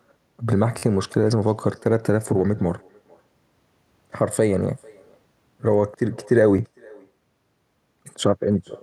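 Throughout the speech, an echo with no canceller trails every phrase. The far end's loudspeaker feeds its microphone and nothing removes it. A quieter, thinner copy returns roughly 400 ms later, about 28 dB below the speech.

From 0.78 to 0.82 s, a repeated buffer causes a quick buzzy stutter. New audio arrived late, so the same slice of about 12 ms played again several times with hard joins. That fits a 512-sample buffer. At 6.58 s, one more repeat gives a single click.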